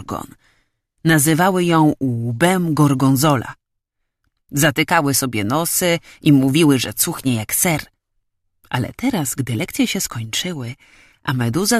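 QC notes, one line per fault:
No faults heard in this clip.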